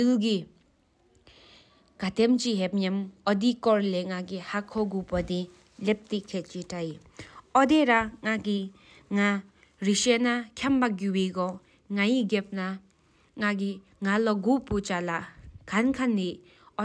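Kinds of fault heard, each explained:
No kinds of fault are heard in this speech.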